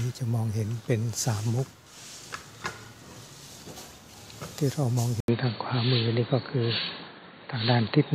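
The input likely switched to a poorer device at 5.20 s: after an 80 ms gap, everything above 4.5 kHz vanishes and faint new noise enters.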